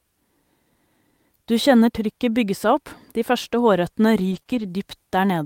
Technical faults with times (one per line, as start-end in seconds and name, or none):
4.31-4.65 lost packet rebuilt from error correction
4.39-4.47 short concealed packet loss